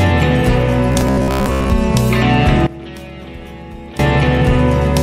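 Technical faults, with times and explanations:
0.92–1.73 s, robotic sound from repeated short buffers: a rigid 66.8 Hz metallic buzz, likely from roughly 15 ms chunks replayed over most of the real audio, unlike irregular codec warble.
2.67–3.99 s, one channel inverted: the level drops about 19 dB as content common to both channels cancels in a mono sum, likely from reversed polarity, leaving a faint residue rather than a true dropout.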